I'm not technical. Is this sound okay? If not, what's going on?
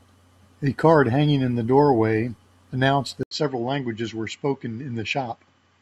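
No. At 3.23 s, after a brief gap, the speech turns duller and slightly quieter until the end, most likely an input switched to a poorer device.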